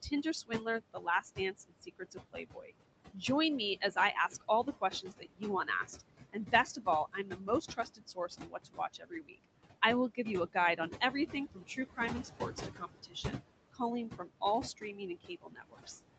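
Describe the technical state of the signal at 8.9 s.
At 8.9 s the speech is caught in a stretch of speech cut by the noise suppressor, running from 3.76 to 9.45 s and ending just before "I will give you". The suppressor mistook parts of the speech for noise. It turned them down by as much as about 21 dB. Soft consonants and word endings sound swallowed and faint. In all, roughly two seconds of the span are affected.

Noise suppressor artifacts are also present here, as throughout the clip. The suppressor lowers the bands it judges to be steady noise by about 20 dB, frame by frame. The background sinks between words and swells under them.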